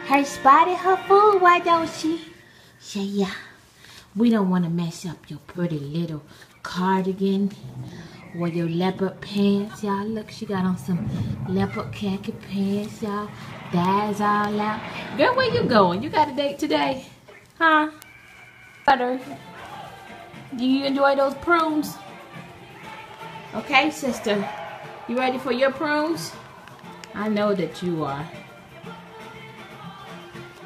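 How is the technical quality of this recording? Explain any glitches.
The recording is marred by word clock ticks running almost its entire length.

From about 0.14 s to 30.55 s, the receiving device's clock is not locked to the sender's and runs roughly 70 ppm off. As the two clocks drift past each other, the receiver periodically slips by one sample, dropping or repeating it. Each slip leaves a small discontinuity in the waveform, heard as a short, sharp tick. The ticks recur steadily about every third of a second, roughly a hundred in all.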